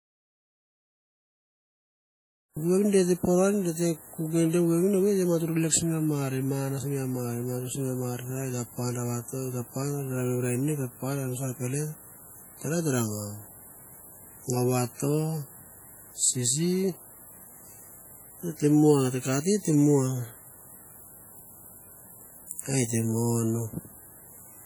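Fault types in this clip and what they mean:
WMA compression: The speech carries heavy transform-codec damage, likely from WMA. Long coding blocks smear quantisation noise over tens of milliseconds. The result rings and sounds washy. A hiss rises and falls with the voice. The damage fits a low bitrate near 32 kbps.
audio dropout to silence: The clip opens in dead silence, with no room tone at all. Speech only comes in at about 2.57 s, arriving mid-flow. The input was likely lost while recording went on. Whatever was said before then is gone.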